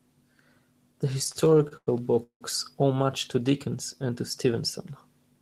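Speech drags and stutters between 1.19 and 2.43 s, where the flow breaks up into thirteen short hesitations, the longest lasting 177 ms. About a third of that stretch, roughly 410 ms, is concealment rather than fresh audio, yet nothing is lost. These are repeated stalls (stutter): packets reached the receiver late or more slowly than playback consumed them, so the jitter buffer kept draining. Each time, the receiver extended the last sound, fading it during the longer waits, until data arrived again. Later, from 3.69 to 4.07 s, the speech runs slightly slow at an unchanged pitch, with sounds drawn out to about 91% speed and 43 ms added in total. This is a jitter buffer slow-down: with its reserve running low or its target delay just raised, the receiver built up a reserve by repeating individual pitch periods or fragments of pauses, stretching the audio without lowering its pitch.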